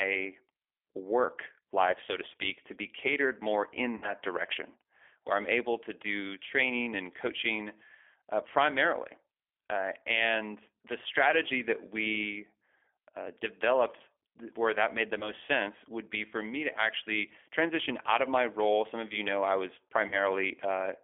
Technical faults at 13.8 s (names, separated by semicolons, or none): G.729 codec